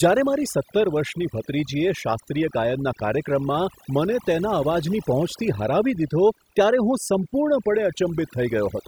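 Throughout, overdone noise removal mutes bands near the noise estimate: the background becomes near silence flecked with twinkling specks, not hiss.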